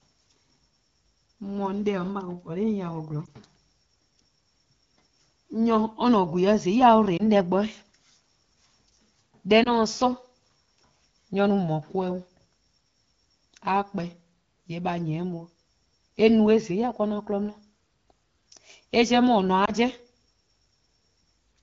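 Radio errors corrupted single frames in the AMR wideband stream, so the decoder discarded them and filled each gap by repeating the last good pitch and vocal tract settings at reduced gain. These lost AMR speech frames appear at 3.26–3.30, 7.17–7.22, 9.64–9.75 and 19.65–19.71 s. Each is a brief dip or warble that fits one missing 20 ms frame. The 12.65 kbit/s wideband codec itself leaves only light coding texture.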